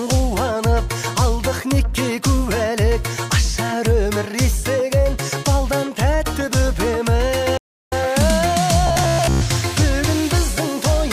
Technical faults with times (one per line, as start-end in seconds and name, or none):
7.57-7.93 stream reconnect
8.87-9.43 robotic sound from repeated short buffers